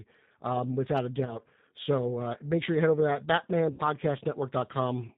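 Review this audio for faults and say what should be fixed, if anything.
The whole clip carries G.729 codec damage, and it's plainly audible. Everything above 4 kHz is gone, so the speech sounds narrow and a bit muffled. There's also a rough, slightly synthetic grain to it, because the decoder rebuilds each 10 ms frame from a vocal tract filter, a pitch predictor and a handful of pulses rather than the actual waveform. That texture fits the 8 kbit/s G.729A flavour. To prevent it, send the call over a wideband codec such as G.722 or Opus instead.

There are two spots of VoIP packet loss concealed by the speech codec. Right after "um without a", from 1.25 to 1.39 s, the sound is stretched and fades, which fits roughly 20 ms of lost audio. After "head over to that", from 3.74 to 3.82 s, more audio is lost, about 50 ms. In both places the decoder keeps repeating its last pitch and filter while fading the gain. 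Since each frame builds on the previous one, the voice stays weak or distorted for a moment after packets return. To prevent it, tighten up the network path and give the jitter buffer some headroom, or turn on forward error correction.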